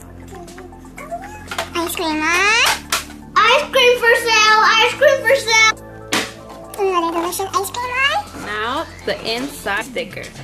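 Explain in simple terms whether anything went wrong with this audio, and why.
Two jumps in the audio come from compressed frames skipped. Whole chunks of the compressed file never reached playback, either because they were missing or because the decoder rejected them as damaged, so the sound leaps ahead. At 5.69 to 5.71 s roughly a fifth of a second is lost, and at 9.80 to 9.82 s about 150 ms. That fits chunks of about 23 ms, with around ten dropped at the first jump and about seven at the second.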